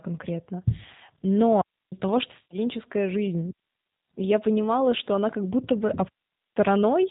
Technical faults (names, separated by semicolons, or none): G.729 codec; digital wireless dropout; VoIP packet loss concealed by the speech codec